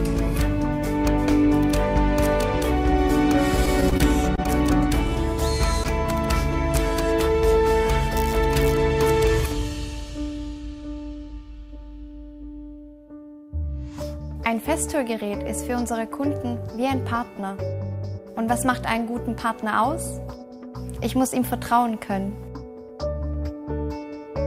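From 3.57 to 4.48 s, repeated packet loss gives a robotic sound. The stream keeps dropping brief chunks, the longest about 21 ms. Each hole is patched by stretching the previous sound. About a tenth of this stretch is filled in, so it sounds choppy.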